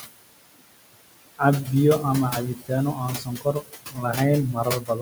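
Speech with room noise sitting about 10 dB below the talker, processed throughout by a noise suppressor that leaves noise suppressor artifacts. The suppressor pulls the background down by about 20 dB in the gaps, so the noise floor drops out between phrases and comes back up underneath the voice, as bands are gated frame by frame.

There are also three passages of speech cut by the noise suppressor, where it mistakes parts of the voice for noise and attenuates them along with the background. The first runs from 2.55 to 2.7 s, right after "biyo ama," dipping by up to about 18 dB for roughly a tenth of a second. The second, from 3.18 to 4.03 s, is the longest, with about half a second of material pulled down by up to about 19 dB. The third, from 4.54 s to the end, is shallower at about 13 dB. In all three, the affected sounds come across as swallowed or faint.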